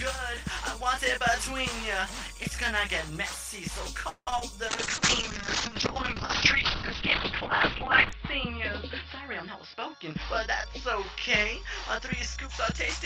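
Around 4.09 to 4.42 s there's repeated packet loss with that robotic sound. Four gaps land close together, the longest about 174 ms, and roughly two thirds of that stretch is the receiver stretching the last bit of audio to cover holes, so it goes choppy and robotic.

From 4.69 s to the end there's a call bitrate drop, with the encoder pushed from 40 kbps down to 7 kbps. Audio bandwidth shrinks from 20 kHz to 4 kHz, and it bottoms out for about 3.4 s. The sound goes muffled and watery, with coarse, rough texture.

Between 9.42 and 12.74 s a jitter buffer speed-up kicks in. The receiver was holding too much audio, so it trimmed tiny pitch-period slices over and over, about 150 ms in total. The sound runs about 5% fast at the same pitch and feels slightly hurried.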